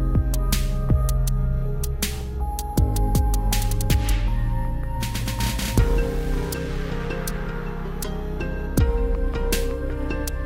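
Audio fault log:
No technical faults turn up anywhere in the signal on listening.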